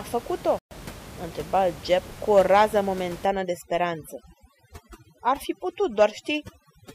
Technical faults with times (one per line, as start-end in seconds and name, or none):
0.59-0.71 playback stall
3.26-6.94 overdone noise removal